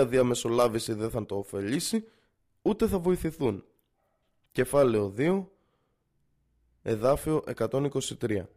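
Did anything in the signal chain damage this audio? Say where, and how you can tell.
No, nothing in the signal chain damaged this audio.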